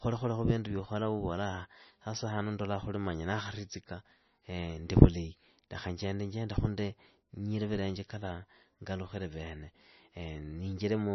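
From start to finish the speech sounds watery and swirly, with a dull top end: nothing survives above 6 kHz, and consonant attacks come across smeared. This is likely MP3 compression applied heavily, at a rate that points to roughly 26 kbps. Starved of bits, the encoder chops off the treble at a fixed frequency and drops weaker frequency components that flicker in and out between frames, producing the swirling texture.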